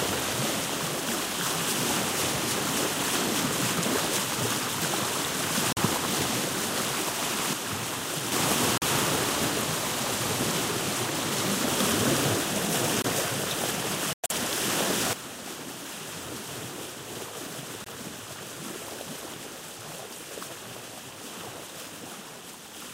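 At 5.73 to 5.78 s the sound drops out abruptly. This is a corrupt frame muted. Compressed frames arrived damaged, the decoder rejected them, and the player filled the gap with silence. The hole is about 50 ms, which fits two short codec frames.

At 7.53 s there is a sudden gain jump. Level and background noise fall together by about 6 dB, then return at 8.32 s. A step change in digital gain without a ramp is the likely cause.

More muted frames follow: 8.78 to 8.86 s, 13.02 to 13.06 s, 14.13 to 14.32 s, and 17.84 to 17.88 s. Each starts as a hard cut to silence. The longest is near 190 ms. The timing around each hole is preserved.

At 15.13 s a second gain jump drops everything by about 11 dB. It stays down to the end. An unramped gain change is likely again.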